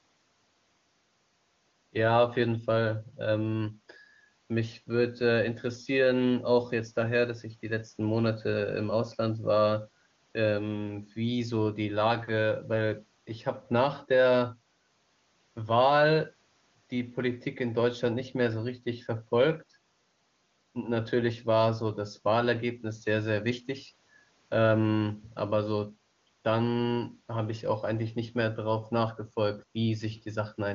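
No technical faults are audible.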